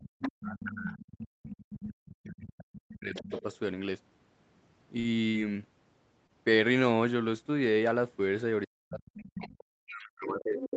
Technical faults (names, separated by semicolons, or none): speech suppressed in double talk; other side's voice leaking through; short stall from a late packet; burst of packet loss